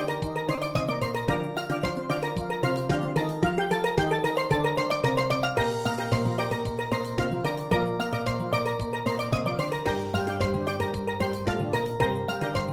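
At 0.55 to 0.59 s there is a short concealed packet loss: about 20 ms of audio never arrived, and the receiver filled the gap by extending the preceding sound before blending back. It heard as a brief smear rather than silence, which separates it from an unconcealed dropout.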